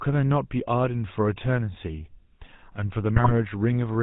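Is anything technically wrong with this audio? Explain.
Yes, two problems are audible. Throughout, the speech has passed through the GSM full-rate codec, which fits the 13 kbps mobile standard. It rebuilds the voice from a vocal-tract filter driven by sparse, regularly spaced pulses and cuts everything above 4 kHz, so the speech sounds muffled, buzzy and gravelly.

From 3.16 to 3.33 s there are GSM bit errors. Corrupted bits reached the decoder and scrambled its filter, pitch and gain values for a short run of frames. The speech breaks into squawks, pops and a gargling distortion before clearing.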